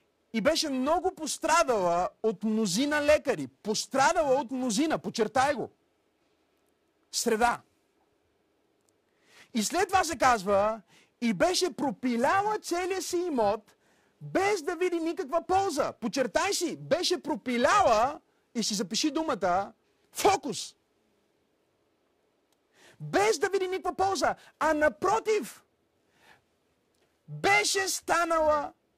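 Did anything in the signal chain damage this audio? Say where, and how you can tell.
Yes. Throughout the speech there is a rough, metallic edge that rides on the voice and disappears in the pauses. That is periodic clock jitter at the converter: interference wobbling its sample clock at around 700 Hz puts sidebands that far either side of every component.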